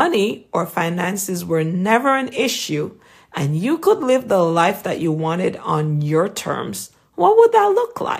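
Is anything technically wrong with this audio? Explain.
No technical faults are audible.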